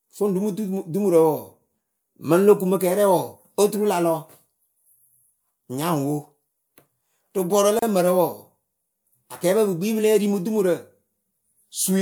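At 7.79 to 7.82 s the speech drops into a gap at a join of encoded pieces, a silence of about 32 ms just before "lǝ mǝrǝ". Two separately encoded segments were butted together untrimmed, leaving encoder delay and end padding in place. Edges are smeared by the codec.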